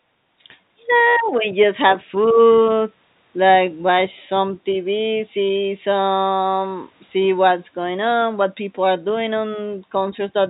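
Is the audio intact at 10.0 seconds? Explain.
Yes, the audio is intact at 10.0 seconds, with no dropout, glitch or other fault at that moment.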